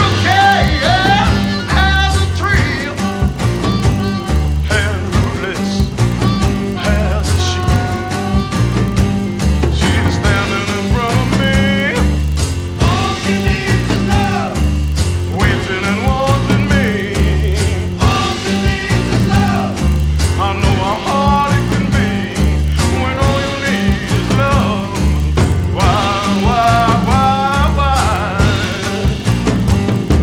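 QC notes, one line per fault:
Throughout: filter restarted on every block. A steady 25 Hz buzz of small ticks, one every 40 ms, rises and falls with the level of the sound. The filter drops its state at each block boundary, which fits 40 ms blocks, and restarts from silence, leaving a transient each time.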